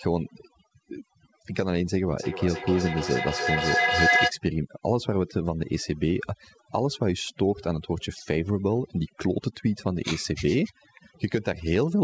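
From start to finish the speech carries overdone noise removal: a noise reducer set far too hard is switching off individual frequency bands it mistakes for noise, taking the quieter parts of the voice with them. Gaps fall to near silence with twinkling specks. That metallic sparkle sets it apart from a plain low-pass or band-limit, which dulls without chirping. The call path's band stops at 8 kHz, which fits a wideband call codec.

From 2.17 to 4.36 s a feedback howl rises. The microphone is picking up a loudspeaker in the same room, and the loop gains level on each trip. It narrows to a tone around 1.5 kHz that peaks about 2 dB above the speech, with the loop's delay roughly 300 ms. Unlike a steady mains hum or an echo that fades, it grows until the loop is broken.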